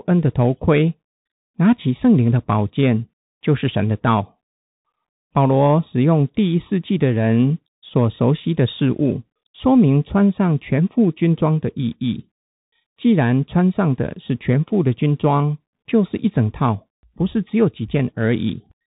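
Throughout, the speech has gone through a Bluetooth CVSD headset codec, whose one-bit up-or-down coding with an adapting step fits a 64 kbps headset link. Nothing above 3.8 kHz survives, leaving thin, boxy speech with scratchy s sounds and granular hiss underneath.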